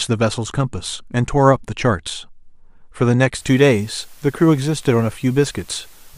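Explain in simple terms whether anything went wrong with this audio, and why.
From 3.38 s to the end, the speech sits on a steady, even hiss. That is low bit depth with dither, which fits an 8-bit signal. Without dither, the rounding error would sound like gritty distortion following the voice. Here it stays a smooth, constant hiss instead.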